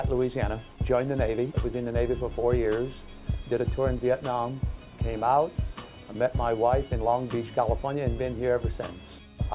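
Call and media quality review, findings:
Nothing stood out on listening; no issues to log against this clip.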